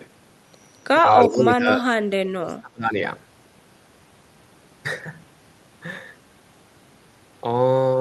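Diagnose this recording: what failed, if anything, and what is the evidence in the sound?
Call processing stage: from 1.22 to 1.28 s a faint duplicate of the speech trails the original by 362 ms, roughly 30 dB down. This is likely an echo leak, with loudspeaker pickup slipping past the echo canceller. Unlike room reverberation, it is a discrete copy at a fixed lag, not a smoothly decaying tail.

Also in call processing, the speech is likely suppressed in double talk from 1.25 to 1.86 s, dipping around 20 dB, and from 2.2 to 2.97 s, sinking as much as 35 dB.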